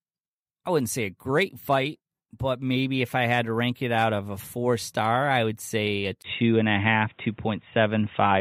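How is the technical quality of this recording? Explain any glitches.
One fault stands out. From 6.22 s to the end, right after "I would say a", the input likely switched to a poorer device. A 20 ms dropout is followed by boxy, band-limited speech with nothing above 3.8 kHz, a level shift of a few decibels and a faint new noise floor.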